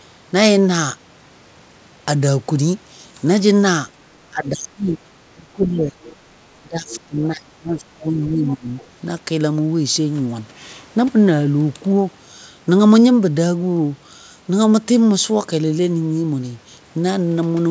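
From 4.30 to 4.96 s, 5.27 to 5.95 s and 6.59 to 8.77 s, the speech is suppressed in double talk. It dips by up to about 30 dB, likely because the echo canceller turned everything down while both sides spoke. Scraps of the other side's voice leak through at 6.04, 6.89, 8.48 and 8.78 s. They sit about 20 to 30 dB below the speech, likely echo that was not fully cancelled. Nothing is heard above 8 kHz, which fits a G.722 call path at 64 kbps.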